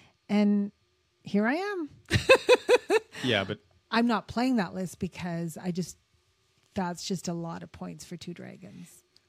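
Two devices, likely running on unsynchronised clocks about 100 ppm apart, force one sample to be dropped or repeated roughly every fifth of a second. From 0.18 s to 9.18 s this produces clock slip clicks: faint, regular ticks through the speech, around fifty.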